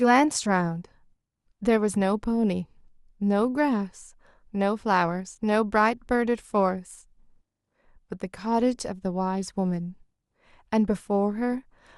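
No technical faults can be heard anywhere in the recording. Nothing in the speech points to a problem in the signal chain at any moment.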